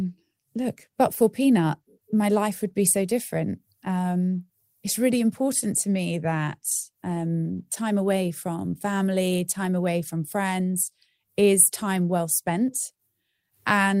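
No technical faults can be heard in the speech at any point, and the signal holds steady throughout.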